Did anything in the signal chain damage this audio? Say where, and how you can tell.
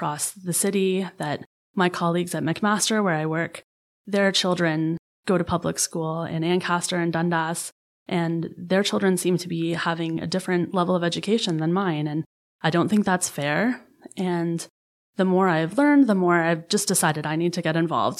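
No, nothing in the signal chain audibly damaged this speech recording.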